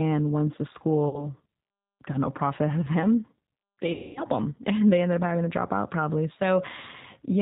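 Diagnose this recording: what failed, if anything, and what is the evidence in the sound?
The codec stage has damaged the whole clip with G.729 compression. The speech has no content above 4 kHz, and the voice has the rough, slightly synthetic texture of a decoder that rebuilds each 10 ms frame from a vocal tract filter, a pitch predictor and a few pulses. The damage is plainly audible, and the sparse sound and narrow band fit an 8 kbit/s low-rate speech codec such as G.729A.

On the network side there are two dropouts, each audible as VoIP packet loss concealed by the speech codec. The first runs from 1.09 to 1.28 s, right after "once the". The second is longer, from 3.93 to 4.23 s, after "out of them they". In each gap the decoder extrapolates from its last pitch and filter while lowering the gain, so the sound stretches and fades. The first gap fits about 40 ms of lost audio and the second about 230 ms, and the voice stays weak for a short while after each one.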